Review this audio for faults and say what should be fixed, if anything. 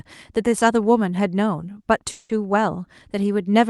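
At 2.11 s the speech stops moving forward and the last sound hangs on as a fading buzz or hiss for about 180 ms, dipping briefly to silence before normal speech resumes at 2.32 s. Nothing is skipped. Speech picks up exactly where it left off, now running about 180 ms later. This call audio freeze was likely caused by delayed packets draining the jitter buffer on the call path, whose top end stops near 12 kHz, as expected for Opus. Prevent it by improving network stability or giving the jitter buffer more headroom.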